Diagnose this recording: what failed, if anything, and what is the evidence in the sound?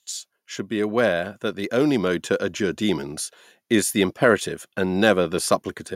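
Between 0.68 and 3.10 s the speech and the background noise swell together, climbing about 4 dB before "is the imperative". This is automatic gain rising in the call-processing stage: the gain control judged the input too quiet and slowly raised its gain.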